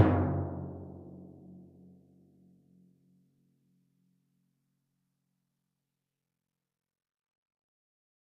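No faults are audible anywhere in this music clip.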